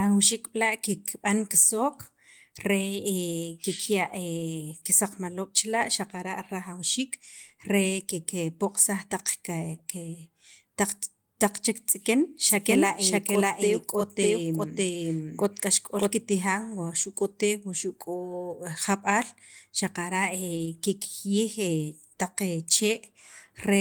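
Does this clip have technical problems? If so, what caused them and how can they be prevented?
Yes. From 12.47 to 16.13 s there is a doubled audio track: a second full-band copy at about the same level trails by roughly 0.7 s. It likely comes from a slower second capture path being mixed in. On a spectrogram this shows as shifted, repeated patterns, and the waveform shows abrupt edges where the copy starts and stops. To prevent it, route each source through only one capture path.

At 20.57 to 20.67 s there is a lost packet rebuilt from error correction. About 60 ms was reconstructed from low-bitrate copies, which fits three lost packets, so the sound turns rough and noisy. To prevent it, stabilise the network connection so that fewer packets are dropped.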